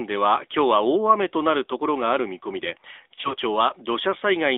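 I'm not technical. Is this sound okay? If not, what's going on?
No. Throughout the clip you can hear the AMR narrowband mobile codec, the compression used on older mobile phone calls. It keeps only a thin band of sound, roughly 300 Hz to 3.7 kHz, and rebuilds speech from a simplified model, so the voice sounds plainly buzzy, muffled and somewhat artificial.

From 3.14 to 3.35 s there are lost AMR speech frames. Several short pieces of the signal went missing, the longest gap about 40 ms. The decoder fills each gap by repeating and fading the last good sound, so speech briefly wobbles and dips.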